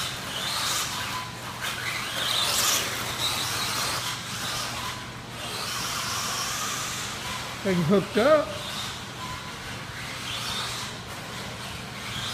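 Nothing here trips the ear at all: the sound just runs along with no glitches, dropouts or oddities worth pointing to anywhere in it.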